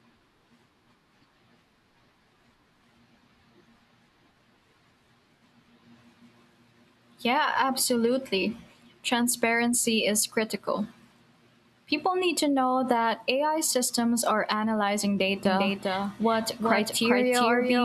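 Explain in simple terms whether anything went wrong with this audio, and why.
A doubled audio track begins at about 15.45 s, right after "systems are analyzing", and runs to the end. From that point the same speech plays twice: a second, somewhat quieter copy trails the first by roughly 0.4 seconds, so everything sounds like it has an echo. That copy cuts in abruptly and has no room sound of its own. The likely cause is the audio being picked up a second time through a slower route and mixed back in.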